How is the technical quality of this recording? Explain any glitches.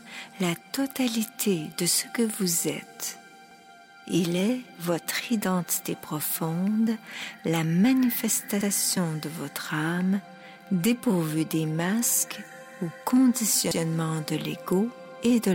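The recording has one recurring fault: overlapping chunks. The audio was handled in 5-second blocks, each starting 100 ms before the previous one ended, so 100 ms of sound plays twice at each join, at 3.51, 8.61 and 13.71 s, heard as a click or stutter repeating at that regular spacing.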